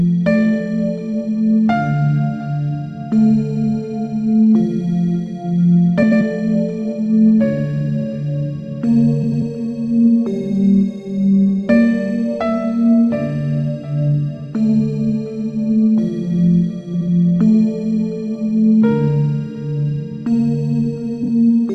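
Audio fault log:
6.02–6.22 s, 9.22–9.42 s, 16.94–17.09 s, 21.23–21.28 s: frames out of order. In each stretch two adjacent blocks of decoded sound play in swapped sequence, about 93 ms each in the first two, 70 ms in the third and 23 ms in the last. The halves are exchanged rather than lost, so timing holds, but the sound briefly flutters and garbles.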